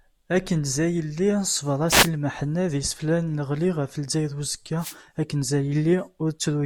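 At 1.87 s a wireless microphone noise hit lasting about 0.22 s breaks through, heard as a brief swish of static over the speech. A second one follows at 4.78 s, lasting about 0.19 s and ending at 4.97 s. Each marks a momentary fade in the FM radio link, where reflected signal paths cancel the carrier at the receiver. The receiver's noise floor then rises and briefly masks the speech until the signal recovers.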